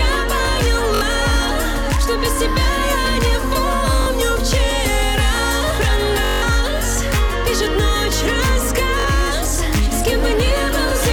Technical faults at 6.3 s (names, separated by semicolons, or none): hard clipping; Bluetooth stutter